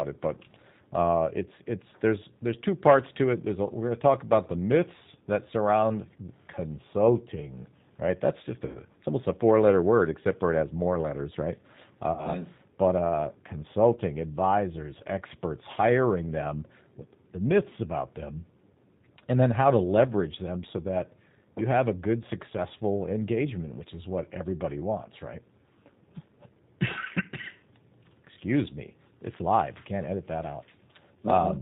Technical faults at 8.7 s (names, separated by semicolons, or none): G.729 codec; VoIP packet loss concealed by the speech codec